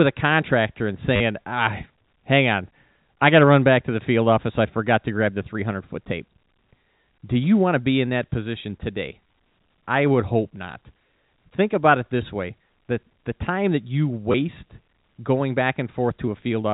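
At 1.16–1.20 s after "a contractor and", 9.27–9.37 s after "in that position today", and 14.32–14.34 s after "the time that you", packet loss with last packet repeated gives buzzy robotic stutters rather than silent gaps, as each missing 10 ms stretch replays the previous one.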